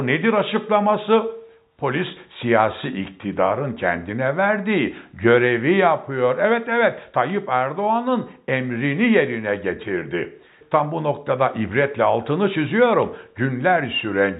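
Nothing goes wrong anywhere in this one, so there's no fault to point to at any moment in the audio.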